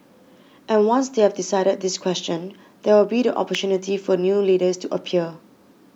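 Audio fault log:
3.55 s, electrical switching spike: a single sharp snap lands on top of the speech, lasting barely a millisecond and peaking around -5 dBFS. The likely cause is a nearby switch or static discharge arcing briefly, with the audio line picking up that burst of energy. On the waveform it shows as one needle-thin vertical spike. On a spectrogram it is a narrow vertical stripe running across all frequencies at that instant.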